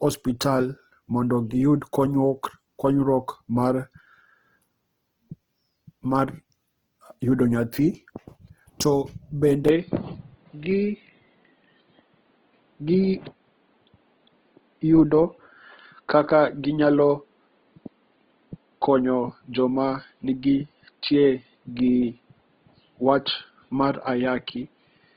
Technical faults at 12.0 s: Opus compression; input switched to a poorer device

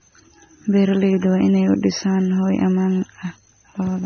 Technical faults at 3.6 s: AAC compression

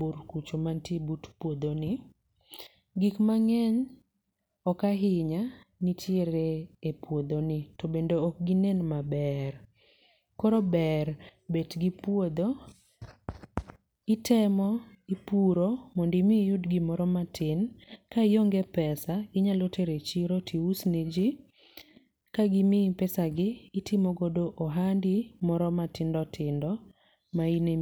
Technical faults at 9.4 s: none

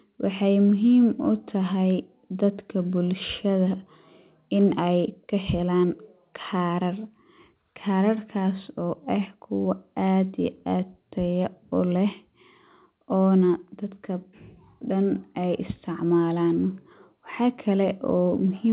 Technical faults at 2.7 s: none

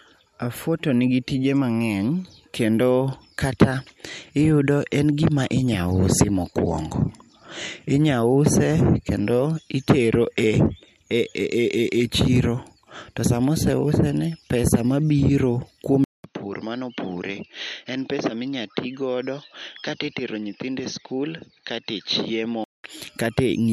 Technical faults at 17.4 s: input switched to a poorer device

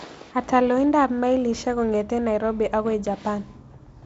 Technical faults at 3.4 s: none

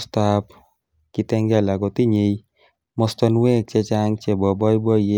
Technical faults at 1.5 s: none

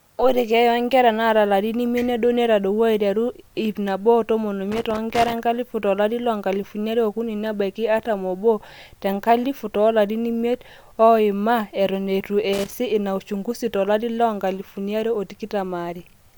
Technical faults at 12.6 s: loose connector crackle

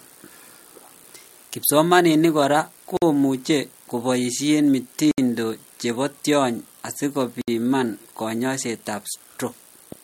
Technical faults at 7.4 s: gap at a join of encoded pieces

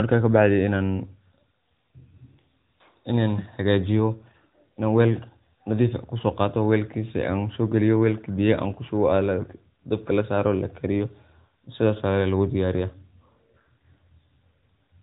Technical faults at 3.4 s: AMR bit errors

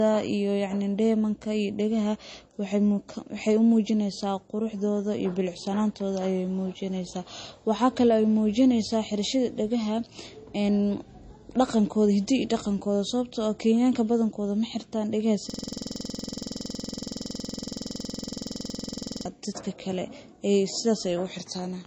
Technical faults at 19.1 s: low-bitrate audio saved at a high bitrate; system hang loop

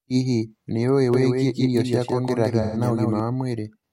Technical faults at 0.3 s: none

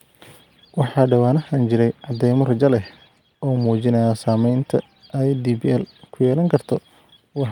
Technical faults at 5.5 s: none

